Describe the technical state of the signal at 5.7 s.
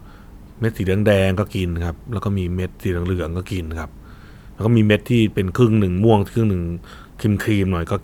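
At 5.7 s the signal is intact, with no audible fault at that moment.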